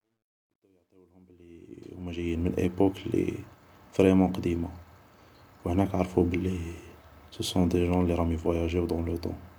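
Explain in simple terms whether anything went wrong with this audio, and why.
Yes, something went wrong at the start. The speech fades in from the beginning to about 2.49 s, and that fade suffers from truncation distortion on a fade. The volume change was done with too little detail kept, which fits a stage holding only 12 bits, and no masking noise was added. At very low levels the sound becomes coarse steps. From 0.0 to 1.38 s it sounds gritty.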